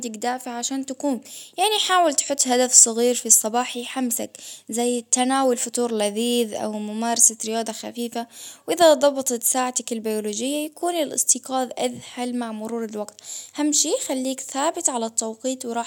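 No technical faults can be heard anywhere in the recording.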